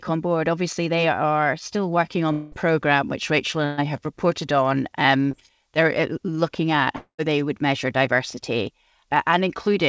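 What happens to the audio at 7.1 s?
At 7.1 s the speech has broken off. From 6.97 s the last sound is stretched into a fading buzz for about 0.2 s, followed by roughly 0.1 s of silence, and speech returns at 7.20 s with about 220 ms of it gone for good. This is a long network dropout, likely caused by packets failing to arrive on the G.722 call path, so the receiver padded the gap with concealment until it had nothing left to extend.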